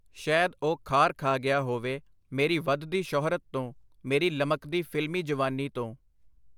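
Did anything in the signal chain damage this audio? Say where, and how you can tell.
No, nothing in the signal chain audibly damaged this speech, and no stage along the way left any mark that can be heard.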